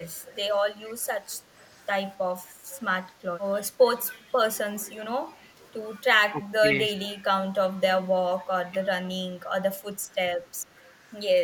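Faint echo leak appears at 0.22 to 0.35, 0.87 to 0.91, 1.34 to 1.74 and 4.08 to 4.14 s. A quiet copy of the speech trails 267 ms behind, likely from an echo canceller passing loudspeaker pickup back. On a spectrogram it shows as weak, time-shifted repeats of the harmonic bands.

From 6.31 to 6.98 s and 8.25 to 8.76 s comes speech suppressed in double talk. The level dips in pieces, by up to about 15 dB, likely from the canceller turning both talkers down together. The waveform envelope shows brief notches.

Echo leak returns faintly at 10.79 to 10.83 s.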